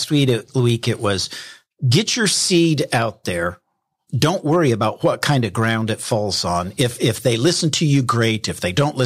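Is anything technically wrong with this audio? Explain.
Yes. Hard clipping runs throughout this speech. Peaks overdrive the signal by about 7 dB. A small fraction of samples get cut flat, adding harsh high harmonics as crackle.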